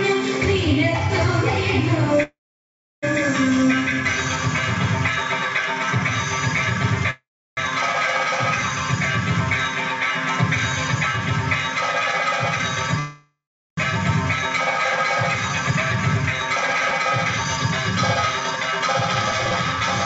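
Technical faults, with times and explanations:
2.23–3.04 s, 7.10–7.59 s and 12.99–13.79 s, call audio freeze: at each point the last bit of sound gets drawn out as a fading buzz or hiss and then drops to silence, for about 0.68 s, 0.34 s and 0.41 s respectively. Nothing is skipped. The audio resumes right where it stopped, so each gap (0.80 s, 0.47 s, 0.78 s) pushes everything after it later. The likely cause is packets held up in transit, leaving the jitter buffer empty with nothing to play.
15.49–19.81 s, jitter buffer speed-up: the audio runs at about 105% speed with the pitch unchanged, so it comes across as hurried. The buffer was holding more delay than it wants, so the receiver keeps snipping out short pieces of one or a few pitch periods to catch up. Across this stretch that adds up to roughly a fifth of a second removed. The call path itself is audible only as codec coding noise and nothing above 8 kHz, which fits G.722 at 64 kbps.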